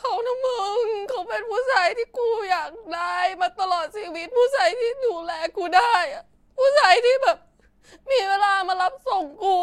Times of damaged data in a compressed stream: none

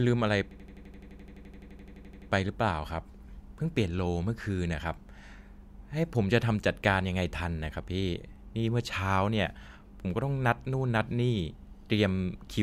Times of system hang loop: 0.51-2.30

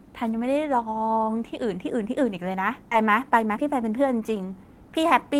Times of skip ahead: 2.91-2.93

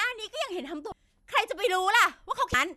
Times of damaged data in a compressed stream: 0.89-0.92, 2.51-2.54

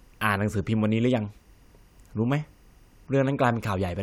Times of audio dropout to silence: none

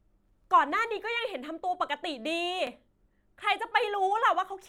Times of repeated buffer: 0.44-0.46, 2.67-2.69

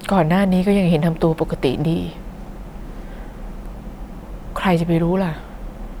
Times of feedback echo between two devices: none

